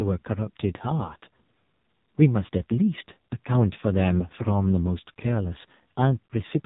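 AMR narrowband mobile codec compression runs through the whole clip. The speech is cut off above 4 kHz and rebuilt from a coarse vocal-tract model. The heavy buzzy, synthetic quality points to a low mode around 5.9 kbps.

Lost AMR speech frames occur at 1.06 to 1.13 s and again at 6.26 to 6.32 s. The decoder patched the gaps by repeating the last pitch and tract settings at falling gain. This gives a brief warbling dip, about 20 ms lost in the first gap and 40 ms in the second, which fades further.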